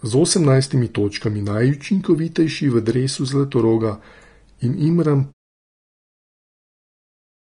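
Throughout the clip, the speech carries plainly audible codec damage, likely from Vorbis compression. Nothing is present above 10.6 kHz, and the remaining treble sounds hissy and grainy. Coarse quantisation of the residue over the smooth spectral floor has turned fine high-frequency detail into noise of similar energy, which roughens tones and softens consonant attacks. The damage is consistent with a low-rate stream of around 34 kbps. A smooth fade-out near 5.3 to 5.5 s also lowers the level toward the end.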